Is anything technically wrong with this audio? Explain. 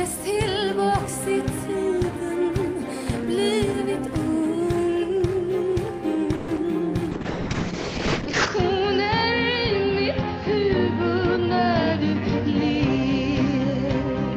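Yes, there are four faults.

From 6.35 to 6.50 s comes a call audio freeze: the last sound is stretched into a fading buzz or hiss for about 130 ms, likely because delayed packets drained the jitter buffer. Nothing drops out, and the audio resumes exactly where it stopped, only later.

At 6.56 to 6.59 s a short concealed packet loss gives a brief smear. Unlike the freeze, about 20 ms of real sound is actually missing and bridged over.

From 7.13 s to the end, a call bitrate drop from 64 to 6 kbps narrows the bandwidth from 20 kHz to 8 kHz. The sound turns muffled and rough, worst for about 1.3 s. This is a lasting change in tone, not a momentary glitch.

From 11.19 to 11.67 s a jitter buffer speed-up plays the sound at 106% speed, trimming about 40 ms. It runs hurried while the pitch stays put, which separates it from a pitch shift.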